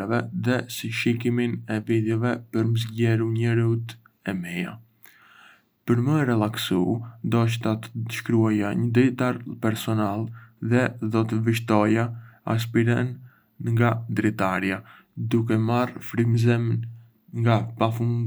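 No audible faults were found.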